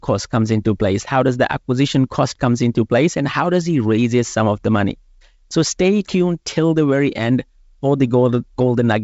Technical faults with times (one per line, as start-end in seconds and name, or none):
none